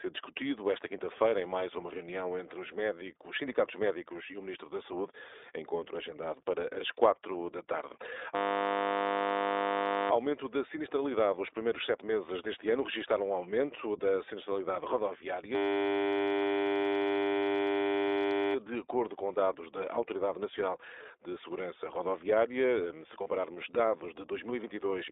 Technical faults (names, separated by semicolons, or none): iLBC codec; system hang loop; lost iLBC frames